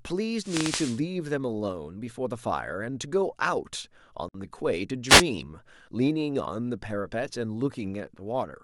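From 0.41 to 1.00 s the analogue FM radio link of the wireless microphone fades as reflected signals partly cancel the direct one, and the receiver's own noise rises to fill the gap. The result is a wireless microphone noise hit: a swish of static laid over the speech for about 0.6 s. The same dropout returns more briefly from 5.08 to 5.23 s, a quicker burst of hiss.

Between those two hits, at 4.29 to 4.34 s, there is a gap at a join of encoded pieces. The speech was encoded in separate sections, and each encoder run adds silent delay at its start and pads its final frame. Because that padding was never trimmed before the pieces were butted together, a hole of about 59 ms opens in the speech. Its edges are smeared, and the speech then resumes where it broke off. The joins fall every 10 s, so only this one lands in the clip.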